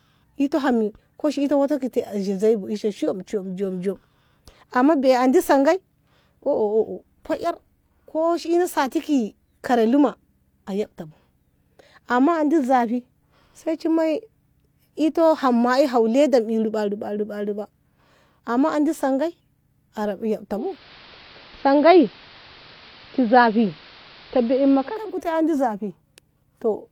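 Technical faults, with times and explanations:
20.52–25.22 s, digital radio blending to analogue: the speech dulls, and steady hiss rises to roughly 25 dB below it, with a level shift of about 1 dB. The receiver lost its digital signal and cross-faded over 0.4 s to the station's AM broadcast, then returned.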